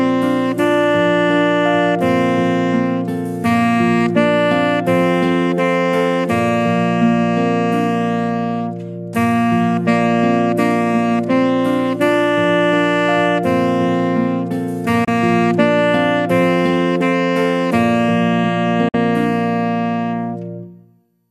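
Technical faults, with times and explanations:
15.04–15.08 s and 18.88–18.95 s, digital broadcast dropout: the sound briefly vanishes with an 8 ms fade to silence while the receiver mutes on bad frames. The gaps of 24 and 48 ms fit one and then two lost frames, and that audio is simply gone.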